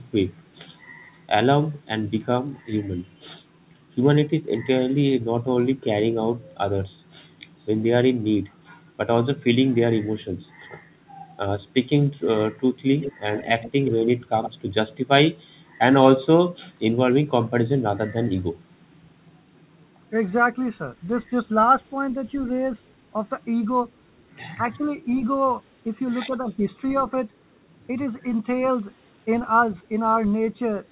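Speech heard over a narrowband call path, with nothing above 4 kHz, which fits G.711 A-law at 64 kbps. An echo leak appears at 13.0–13.13, 13.36–14.26, 14.43–14.51 and 22.46–22.50 s. A copy trails the voice by 113 ms, at about 10 dB down, and about 25 dB down at 22.46 s. The likely cause is an echo canceller letting loudspeaker pickup through. Speech is suppressed in double talk at 24.57–24.62, 24.78–24.83 and 26.29–26.36 s. The voice dips briefly, by up to around 10 dB, likely because the canceller turned down both sides.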